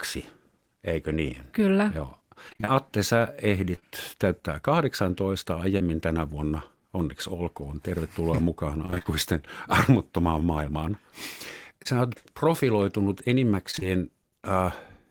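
At 2.49 to 2.69 s the speech breaks into repeated packet loss, with a robotic, choppy sound. Five gaps, the longest about 22 ms, remove roughly 100 ms of audio. The receiver covers each hole by extending the preceding sound, so about half of this 0.2 s stretch is synthetic fill rather than real signal.

At 3.75 to 3.84 s come two back-to-back instances of short concealed packet loss, each about 20 ms. Another follows at 5.78 to 5.82 s, just before "tänä vuonna". Each time the decoder continues the prior pitch or shaped noise across the hole and crossfades back, giving a brief smear or wobble.

Repeated loss returns at 8.86 to 9.07 s, with five gaps of up to 27 ms and about 100 ms missing, again roughly half concealed. A single 20 ms concealed gap at 11.83 to 11.87 s precedes "oot profiloitunut". Right after those words, 13.71 to 13.83 s brings three more gaps, about 60 ms lost in all, with the same robotic chop.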